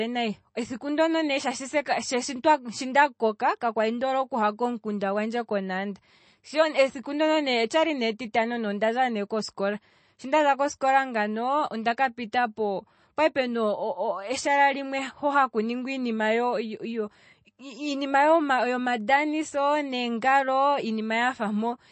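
From start to finish the speech carries plainly audible damage, likely from MP3 compression. Nothing survives above 8.3 kHz. Starved of bits, the encoder dropped the treble and switched weak detail on and off, giving a watery, swirly sound that fits roughly 32 kbps.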